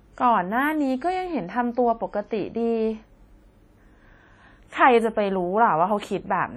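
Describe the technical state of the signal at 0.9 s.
At 0.9 s the speech has the washy, ringing smear of heavy transform coding, present across the whole clip. That's likely WMA compression. Its long blocks spread quantisation noise over tens of milliseconds, and the breathing hiss suggests a low bitrate, around 32 kbps.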